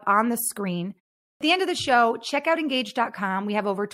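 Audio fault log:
1.33 s clipped start after a pause: after a 0.41 s silence the output has gone idle and must wake, so the first 77 ms of speech is lost and it begins abruptly. Muted pauses only quiet the gap, but here the onset itself is gone.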